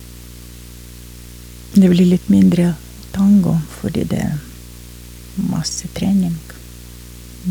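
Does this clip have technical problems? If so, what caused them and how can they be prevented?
Yes. A steady buzz sits under the speech for the whole clip, pitched at 60 Hz with a gritty hash riding above it, and it stays at roughly 20 dB below the speech. This is video or display buzz: a nearby screen or a video cable is coupling its 60 Hz field-rate pulses into the audio path, so the picture's refresh cycle becomes audible as a raspy hum. To prevent it, route audio cables away from monitors and video leads, use balanced connections, and keep displays at a distance from the microphone and its wiring.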